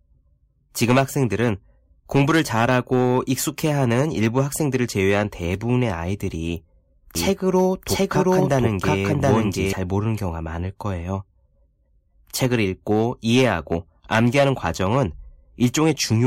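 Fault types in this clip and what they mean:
Doubled audio track: a second, equally loud copy lags about 0.7 s from 7.15 to 9.73 s, starting and stopping abruptly, likely from a duplicate capture path.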